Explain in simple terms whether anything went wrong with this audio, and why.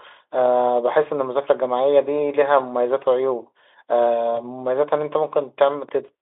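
Two things went wrong in this speech recording.

At 0.41 s there is a dull thump as the audio's resting level, the centre line the waveform swings around, suddenly shifts. This is a DC step, the kind of jump a converter makes when it recalibrates or when an input carrying a steady offset is switched in. The shift lasts until 5.89 s. Between the two times the speech carries on unchanged.

From 4.36 to 4.40 s there is VoIP packet loss concealed by the speech codec. One 20 ms piece of audio never arrived. The Speex decoder covered the gap by stretching out the last sound it had, so for a moment the speech turns into a fading buzz or noise. Because each new piece is rebuilt from the one before, the speech stays weak or distorted for tens of milliseconds or more after real audio returns.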